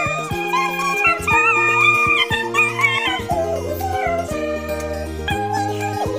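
Audio read two samples at a time (double speed) runs throughout. The reader treats each pair of samples as one frame, as if it assumed two channels or samples twice as wide, so everything plays at 2.0 times speed and an octave higher.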